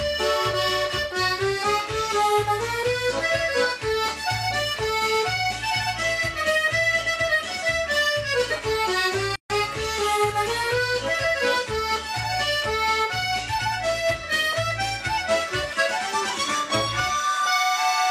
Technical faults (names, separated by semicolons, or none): gap at a join of encoded pieces